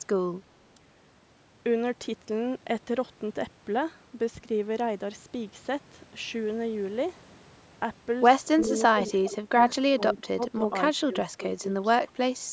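Speech suppressed in double talk starts at 8.65 s and runs to 9.12 s. The level dips by roughly 10 dB in short patches, likely because the far side was talking at the same moment and the echo canceller couldn't tell the near voice from loudspeaker echo, so it turned both down. Overlapping that, an echo leak at 8.66 to 8.70 s lets through a faint copy of the voice, delayed by 392 ms and sitting about 20 dB below the speech. The likely cause is a speakerphone whose canceller didn't fully remove its own pickup. A second leak follows at 9.26 to 9.31 s, louder at about 15 dB down. The same suppression returns at 9.30 to 9.57 s and 9.94 to 10.74 s, with dips of about 15 dB, and again at 11.03 to 11.71 s, where the voice drops by around 20 dB.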